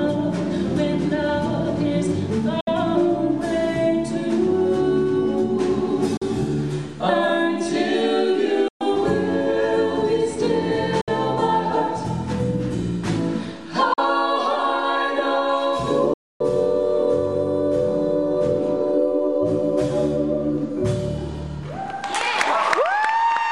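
Silent gaps at 2.61, 6.17, 8.68, 11.01, 13.93 and 16.13 s, lasting 61, 41, 122, 61, 41 and 264 ms, are likely Bluetooth dropouts. Packets missed the headphones and went unplayed. Each hole has abrupt edges or a fade of a few milliseconds, and the sound resumes further along rather than picking up where it stopped, which sets it apart from a buffer stall.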